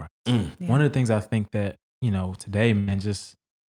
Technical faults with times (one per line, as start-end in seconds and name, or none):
2.79-2.90 burst of packet loss